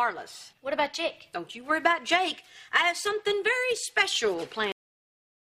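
At 4.72 s the audio has a cut-off end. The sound stops mid-event, with no fade or natural decay. The final stretch of audio was never written out or played, so the stream ends abruptly. Everything after that point is digital silence, lasting roughly three quarters of a second. The ear hears the sound chopped off partway through rather than finishing, followed by a dead, flat gap where nothing at all remains.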